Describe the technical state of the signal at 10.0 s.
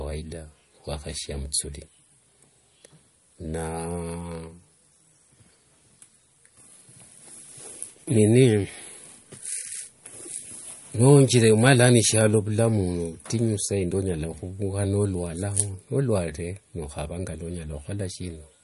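At 10.0 s the speech carries the same damage heard across the whole clip: nothing above about 11.2 kHz, with a watery, swirling quality as faint detail flickers in and out. That points to MP3 compression, likely at a low bitrate near 48 kbps, where the encoder runs short of bits, truncates the treble and drops weak frequency lines frame by frame. A plain low-pass filter would dull the top end without that warbling instability.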